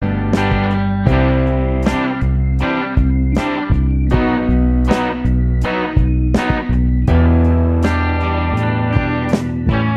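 No technical faults can be heard at any point in the music.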